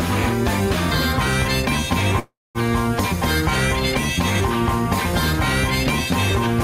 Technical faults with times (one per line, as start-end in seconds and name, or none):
2.19-2.58 call audio freeze